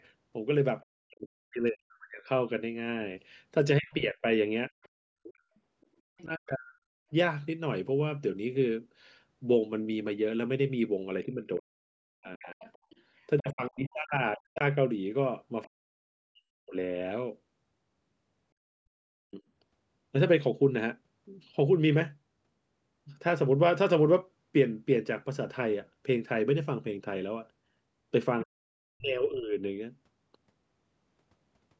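A speech clip where the talker dips by roughly 40 dB at 0.82–2.28, 3.79–7.11, 11.25–16.75, 18.65–19.43 and 28.44–29.57 s, likely speech suppressed in double talk, with the canceller turning down the talker along with the loudspeaker echo. Faint traces of the other side's voice leaking through sit well below the talker at 3.9–6.22 and 12.66–13.4 s, likely residual loudspeaker echo the canceller missed.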